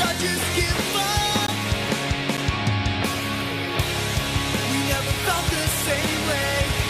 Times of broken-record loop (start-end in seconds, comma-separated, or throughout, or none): none